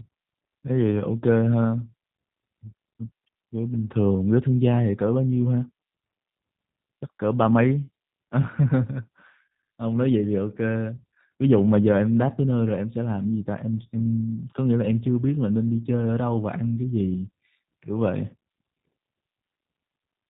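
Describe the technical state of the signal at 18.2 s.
At 18.2 s the speech carries G.729 codec damage, present across the whole clip. Each 10 ms frame is rebuilt from a vocal tract filter, pitch predictor and sparse pulses, which fits 8 kbit/s G.729A. This leaves the voice audibly rough and synthetic, and a spectrogram shows a hard ceiling with nothing above 4 kHz.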